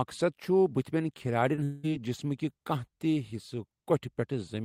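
At 1.55 s the speech briefly smears for about 20 ms, ending by 1.59 s. This is short concealed packet loss. A small piece of the call arrived too late for the decoder. The receiver covered the gap by extending the sound just before it, then blended back into the real signal. The result is a quick wobble rather than a clean cut.

Just after, from 1.63 s to 1.85 s, the speech gives way to a stretched continuation lasting about 200 ms. The likely cause is a long network dropout, where the incoming audio stopped for that whole stretch. The receiver kept regenerating the last sound to fill the gap. That synthetic tail never decays to silence before real speech resumes. What was said in that stretch is gone.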